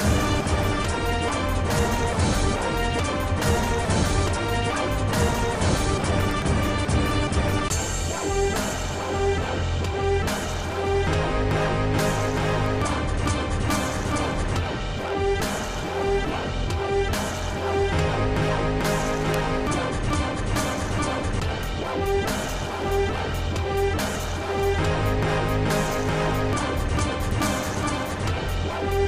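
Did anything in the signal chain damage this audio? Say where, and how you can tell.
Yes. Five isolated, sharp ticks stand out at 6.31, 12.66, 19.34, 21.63 and 27.31 s. Each is a single broadband click, unrelated to the surrounding audio. They peak at about -6 dBFS at 19.34 s, about -12 dBFS at 6.31 and 21.63 s, and about -18 dBFS at the others. These are bit error spikes from the digital link or storage: a flipped bit throws a sample or two off by a power of two, and the waveform snaps straight back.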